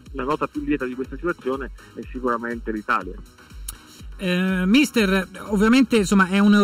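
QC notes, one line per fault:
Throughout, channel delay (comb filtering): one channel trails the other by a little under a millisecond, and summing to mono cancels shared content at evenly spaced frequencies, the first near 700 Hz, leaving fixed notches that make the sound hollow and phasey.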